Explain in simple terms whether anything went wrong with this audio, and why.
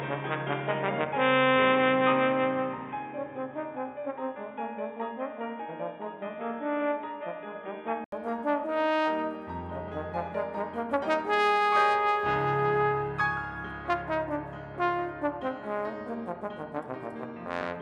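Input switched to a poorer device, from the start to 8.12 s: the sound is dull and boxy, with nothing above 3.8 kHz and faint extra background noise, likely from a lower-quality microphone. An 80 ms gap at 8.12 s marks the switch, then the sound brightens.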